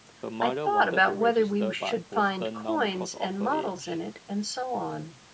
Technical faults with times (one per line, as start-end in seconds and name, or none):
none